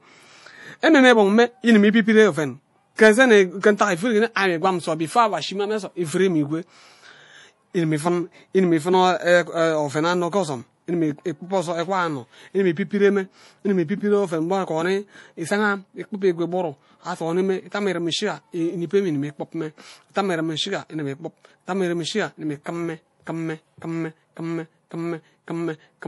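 A speech recording with plainly audible MP3 compression damage throughout: nothing is present above 11.5 kHz, and the sound has a watery, swirling quality as weak spectral components drop in and out between frames. This most likely comes from MP3 encoding at a low bitrate, which fits roughly 48 kbps. Pre-echo occurs from 2.96 to 2.99 s, just after "idim ibibire oven". Quantisation noise from the encoder's transform block spreads about 30 ms ahead of a sharp onset, so a brief hiss precedes the attack and softens it.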